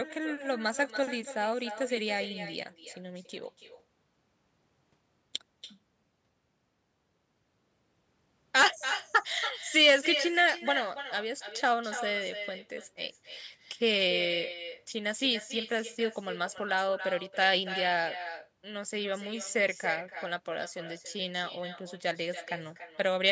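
At the far end the call is playing over a loudspeaker, and its microphone feeds that sound straight back with no echo canceller to remove it. The result is echo with no canceller, running through the whole speech clip: every phrase returns roughly a third of a second later as a copy about 11 dB quieter, sounding thin, with the band topping out near 8 kHz as the call's microphone processing shapes it.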